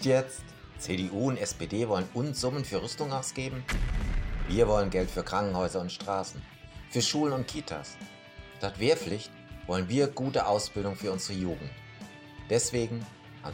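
A single sharp click sounds at 9.00 s in this audio. Its likely cause is dropped samples. A tiny stretch, a fraction of a millisecond, is missing. The waveform jumps straight to a later value. Nothing audible is lost, but the jump clicks.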